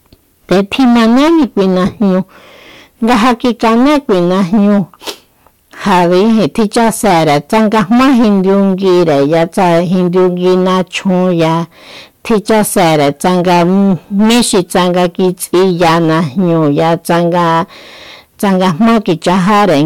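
Hard clipping runs through the whole speech clip: the signal is driven about 17 dB beyond what the stage can pass, so roughly a fifth of samples hit the ceiling. The waveform shows flat-topped peaks, the spectrogram broadband harmonic smear, heard as harsh fuzz on every loud sound.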